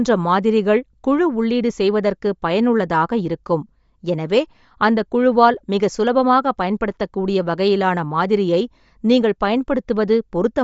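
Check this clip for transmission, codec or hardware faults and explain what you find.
One codec fault runs throughout the speech. Bluetooth LC3 compression, likely: nothing sounds above about 7.7 kHz, and sparse bands are noise-filled, giving a grainy, breathy edge. That noise fill, unlike a plain low-pass, suggests low-bitrate LC3, here in 10 ms frames.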